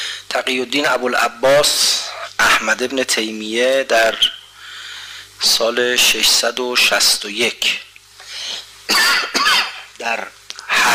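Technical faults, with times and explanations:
1.67–1.79 s, AAC frame loss with concealment: for about 85 ms the decoder had no valid frames to work from. That gap fits roughly two lost AAC frames. The decoder covered it by reusing the spectrum from the last good frame, with scrambled signs or interpolated energy in place of the missing data. Because the dropout is brief, the result is a smeared, noisy or phasey patch rather than a fade into silence, before the clean signal resumes.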